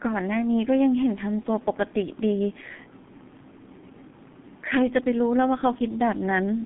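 G.723.1 codec damage runs throughout the speech, from start to finish. This low-rate telephony coder works in 30 ms frames and rebuilds the voice from a coarse, slowly updated model, which fits a stream of about 6 kbit/s. The sound is squeezed into a line band of roughly 150 Hz to 3.5 kHz, with nothing above 3.7 kHz, so it comes across muffled and hoarse, with consonants smeared together. The damage is heavy.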